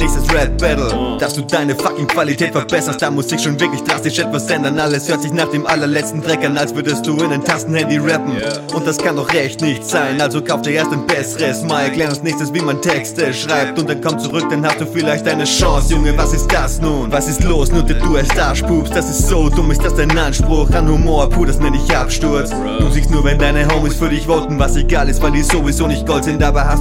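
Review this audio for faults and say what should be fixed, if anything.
At 14.30 s there is a brief buzzy click, a tiny stutter too short to hear as a repeat. This is a repeated buffer: fresh audio failed to reach the output in time, so the device replayed its last block. The sound fits a 64-sample buffer, roughly 1.45 ms, played perhaps three extra times back to back with a hard join each time. The repeats become a short buzz, and essentially no audio is lost. To prevent it, give the playback path a larger buffer or more scheduling priority so new audio is always delivered before the device needs it.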